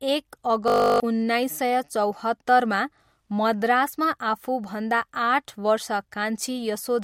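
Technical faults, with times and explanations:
0.68–1.00 s, system hang loop: playback stalled while the hardware recycled one 20 ms buffer 16 times, a steady 50 Hz buzz replacing roughly 300 ms before "उन्नाइस सय".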